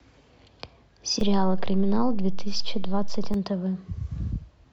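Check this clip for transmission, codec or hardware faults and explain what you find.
One hardware fault is present: a DC step from 1.21 s to 3.34 s. The zero line jumps by about -20 dBFS and returns, giving low thumps at both edges. On the waveform, the baseline visibly shifts and returns. The spectrogram shows brief low-frequency bursts at those two moments, while the speech continues unchanged.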